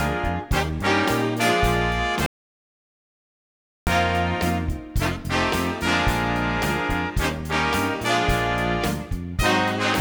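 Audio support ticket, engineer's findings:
Audio dropout to silence, 2.26–3.87 s: sound cuts out mid-flow, about 1.6 s of silence, no room tone, then resumes abruptly. Likely input loss upstream (device disconnect, link failure or mute) while recorder kept writing silence. Content in gap unrecoverable.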